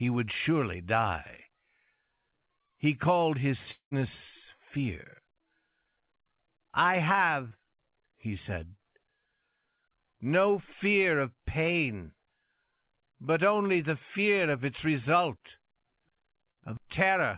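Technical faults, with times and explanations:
3.71–3.94 s, long network dropout: right after "called his", the sound is continued as a fading fill for about 0.2 s, the last 0.11 s of which is silence. Roughly 0.21 s never arrives, likely a network outage, so the speech resumes further on with that stretch gone.
7.48–7.54 s, short concealed packet loss: a brief smear or wobble. About 30 ms of audio failed to reach the decoder in time, and the receiver covered roughly 28 ms of it by extending the preceding sound before blending back into the real audio.
16.51–16.59 s, burst of packet loss: a short continuation of the last sound that fades away. Around 60 ms was lost in a row. The receiver stretched the last sound for about 52 ms while turning it down, and the speech picks up later without the missing part.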